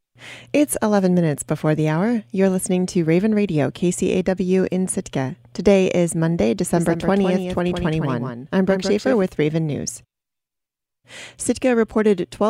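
Speech, and from 6.76 s to 9.22 s a second copy of it rides along behind the original, trailing by around 150 ms and sitting roughly 5 dB lower, so every syllable lands twice with a flat, slap-like repeat. The copy has no reverberant tail or room colour, and it switches in and out abruptly at both ends. This is a doubled audio track, likely from the same signal being picked up again through a slower path and mixed back in out of step.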